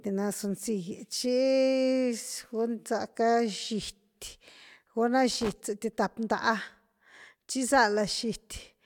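A worn or dirty contact in the signal path briefly made and broke connection between 5.31 and 5.53 s, chopping the speech. The result is loose connector crackle: an irregular burst of scratchy crackling lasting about a fifth of a second.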